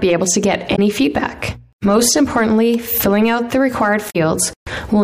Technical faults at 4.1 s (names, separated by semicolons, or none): damaged data in a compressed stream